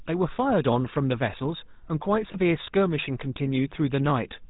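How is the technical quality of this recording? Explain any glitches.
The recording has plainly audible codec damage for its whole length, plus one brief glitch partway through.

GSM full-rate codec, throughout: the speech is rebuilt from a vocal-tract model driven by sparse, evenly spaced pulses, with nothing above 4 kHz, which fits the 13 kbps GSM full-rate codec. The result is a narrow, buzzy, gravelly roughness on every phrase.

Lost GSM frames, at 2.32 to 2.36 s: one missing stretch of roughly 20 ms, which points to a single dropped frame, was filled by repeating the last good frame's settings. It is heard as a short, rough, metallic ring.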